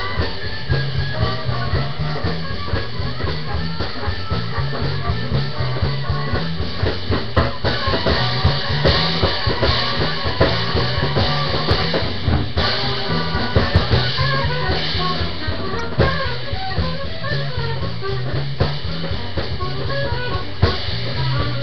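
At 15.79 s there's a short corrupt frame decoded: a quick glitch of misplaced energy that lasts only a moment. Some bits in the compressed data got flipped, and the decoder played the damaged frame anyway, so wrong gains or misread codes pushed energy into frequencies that don't belong there. The error peaks at about -15 dBFS, and its brevity suggests only a few frames took the hit.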